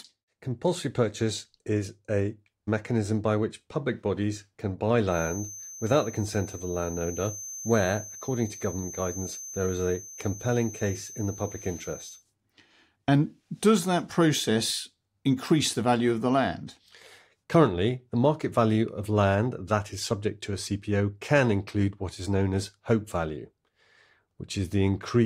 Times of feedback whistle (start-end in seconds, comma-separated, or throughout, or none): 5.05-12.25